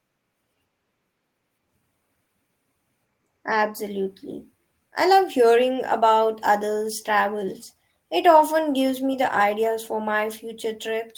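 Speech recording, no audible technical faults found.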